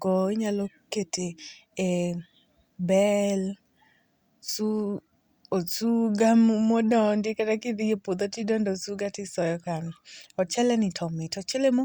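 No technical faults can be heard anywhere in the speech. Nothing in the audio calls for a time-stamped description.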